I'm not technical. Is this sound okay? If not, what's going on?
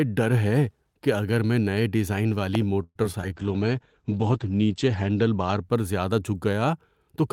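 No. There are three separate faults in this speech clip.

At 2.55 to 2.58 s, right after "اگر میں نئے ڈیزائن", there is a single loud pop, a sharp click that stands well above the speech while the talking continues underneath. It sounds like a brief electrical jolt entering the signal, likely from a plug, a switch, or static discharge. It is over in a few hundredths of a second.

From 2.83 to 3.24 s the speech turns choppy. This is repeated packet loss: pieces of the audio failed to arrive in time, four times in quick succession. Each time, the system filled the hole by stretching out the last bit of sound, and some of the audio was simply lost. The longest gap is about 0.12 s, and about a third of that stretch is patched rather than real.

From 3.32 to 6.22 s the call bitrate drop takes over. The connection told the sender to squeeze the audio much harder, so the speech sounds rougher and duller. 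The crisp upper range is cut off above roughly 8 kHz. The worst point lasts about 1.3 s, and then the quality recovers near the end of the clip.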